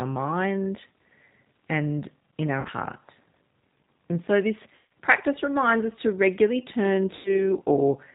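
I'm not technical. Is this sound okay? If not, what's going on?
No. Two faults can be heard in this speech.

G.729 codec, throughout: the speech has been squeezed through a low-data phone-call codec. Rather than sending the actual sound, it sends a rough recipe, the shape of the throat, the pitch and a few pulses, and the far end rebuilds the voice from that. Nothing above 4 kHz survives, so the voice sounds muffled, slightly rough and a little artificial, like a cheap internet call.

VoIP packet loss concealed by the speech codec, at 2.61 to 2.69 s, 4.75 to 4.86 s and 7.15 to 7.44 s: small chunks of the call went missing in transit, about 40 ms, 160 ms and 100 ms worth. The decoder covered each gap by stretching the last bit of sound it had into a buzzy tone or a coloured noise that fades. The gaps fall right after "and in our", after "so this" (just before "practice reminds us to"), and after "us to regularly turn". 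Because each rebuilt moment depends on the one before, the voice stays weak or smeared for a short while after each gap.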